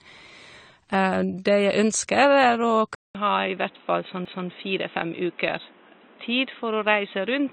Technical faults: AAC compression; input switched to a poorer device; CD skip

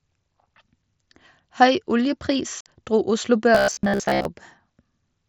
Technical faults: unconcealed Bluetooth headset packet loss; robotic sound from repeated short buffers

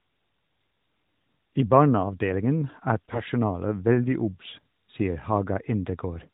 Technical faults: AMR bit errors

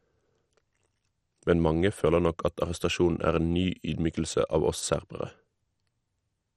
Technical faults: MP2 compression

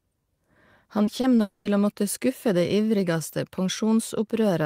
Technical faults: repeated packet loss (robotic sound); long network dropout

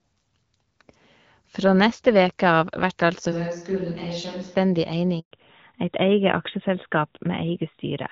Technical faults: switch to a distant microphone; handover gap; fallback to narrowband

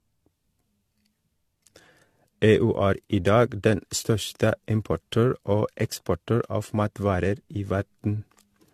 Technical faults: generation loss

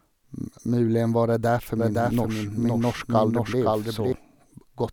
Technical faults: doubled audio track

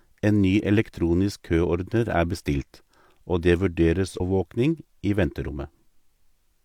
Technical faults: stream segment skipped

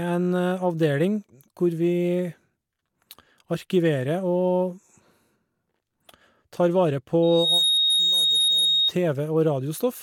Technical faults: loudspeaker feedback squeal

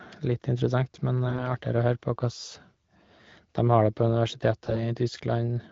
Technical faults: AMR bit errors

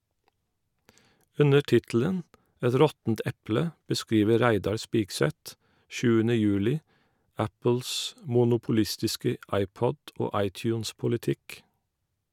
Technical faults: none

